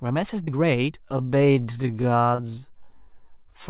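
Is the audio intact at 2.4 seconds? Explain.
No. At 2.4 seconds the audio is damaged in two ways.

First, there is a short concealed packet loss from 2.35 to 2.41 s. About 40 ms of the call never reached the decoder in time. The receiver patched roughly 31 ms of that gap by extending the preceding sound and then blending back into the real signal. The result is a brief smeared wobble, and anything very short at that instant may simply be missing.

Second, that moment sits inside a time-stretched section running from 0.99 s to the end. The pace suddenly drops to about 0.54 times normal while the pitch stays put. This is likely the work of software that lengthened the audio by repeating short slices. The slowed stretch drags.

Throughout, the call codec passes nothing above 4 kHz.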